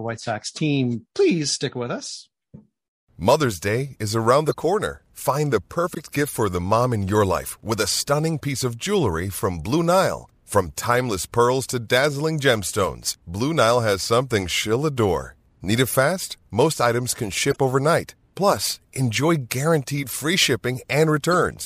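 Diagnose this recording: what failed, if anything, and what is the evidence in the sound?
The codec stage failed: damaged compressed frames reached the decoder and were played as corrupt frames decoded, with bits misread as wrong gains and codes that scattered energy across the wrong frequencies. Short chirps and noise bursts sit in the speech at 4.46–4.54 s just after "is around", at 5.83–5.97 s just before "gift for the mom", at 12.73 s, at 17.51–17.58 s after "items can", and at 21.31–21.34 s. Each lasts roughly one to seven frames. The loudest, near 4.5 s, peaks around -5 dBFS.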